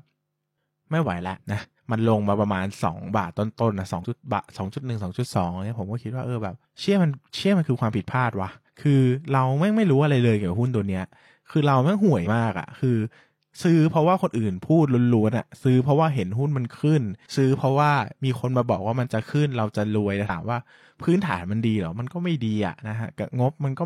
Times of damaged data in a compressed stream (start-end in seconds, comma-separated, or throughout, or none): 1.58-1.65, 4.00-4.04, 12.22-12.27, 20.25-20.30